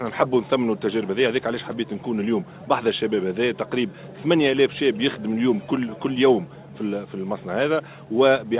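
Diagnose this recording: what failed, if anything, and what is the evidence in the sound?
Nothing failed; the narrowband call path is working as expected.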